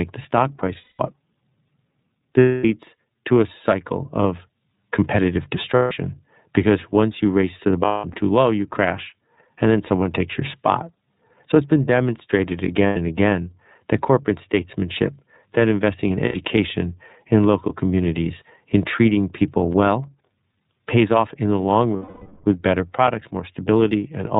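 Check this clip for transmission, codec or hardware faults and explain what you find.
Two faults are present: the whole recording has passed through the iLBC codec, and seven short stretches are damaged by lost iLBC frames.

iLBC codec, throughout. The speech is band-limited with nothing above 4 kHz, and the codec damage is plainly audible as a slightly rough, synthetic quality. iLBC codes each frame's excitation independently. The character points to the 30 ms, 13.33 kbps mode, where coarse quantisation of the residual gives voiced sounds a grainy, artificial texture.

Lost iLBC frames, at 0.77–1.00 s, 2.40–2.65 s, 5.75–5.92 s, 7.86–8.16 s, 12.87–12.97 s, 16.25–16.36 s and 21.96–22.45 s. Packets went missing, and the decoder filled each gap by repeating the last pitch cycle blended with noise, fading it over the longer losses. The result sounds like a held, buzzy or breathy vowel. The gaps last 210, 240, 150, 210, 90, 90 and 480 ms. 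The 7.86 s loss is scattered over 300 ms, with its longest unbroken run around 200 ms. The 5.75 s gap falls between "a cycle of competitive" and "because once you race". The 12.87 s gap sits between "it's been demonstrated" and "again that corporate statesmanship", and the 16.25 s gap comes right after "statesmanship that investing in". The final 480 ms gap is the longest, trailing off into a decaying drone. Because each iLBC frame decodes without reference to earlier ones, the voice is right again almost at once after every gap.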